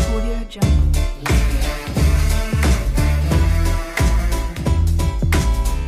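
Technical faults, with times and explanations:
Throughout, sample clock jitter: the converter's timing wanders by around 5 microseconds, so samples land slightly early or late. The error follows the waveform's slope, sitting about 30 dB below the signal, and is heard as hiss or grit that swells on loud, bright passages and vanishes in silence.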